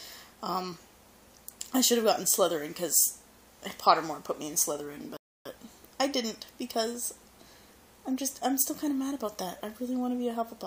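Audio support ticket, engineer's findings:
Playback buffer underrun, client player: downloaded audio ran out at 5.17 s and output halted until more data arrived. Rebuffering stall heard as a silent gap to 5.46 s, about 288 ms added, sound resuming exactly where it stopped. Nothing dropped.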